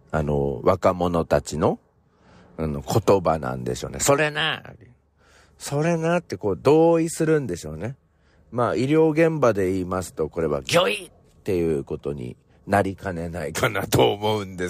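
No technical faults are audible.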